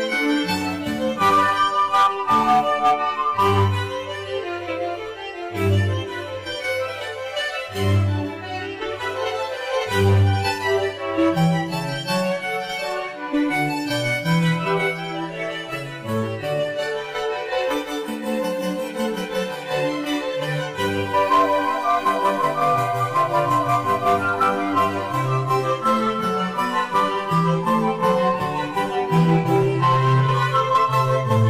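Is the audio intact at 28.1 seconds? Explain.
No, hard clipping affects 28.1 s, as it does throughout. The audio is driven about 7 dB past what a stage can pass, so a small share of peaks are sliced flat, adding high harmonics heard as crackle on peaks.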